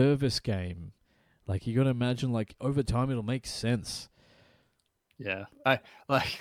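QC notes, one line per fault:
No faults found.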